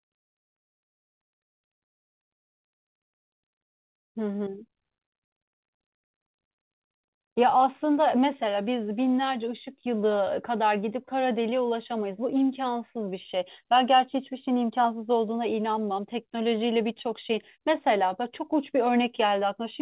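There are no technical faults in this speech, which comes through a G.711 call path with nothing above 4 kHz.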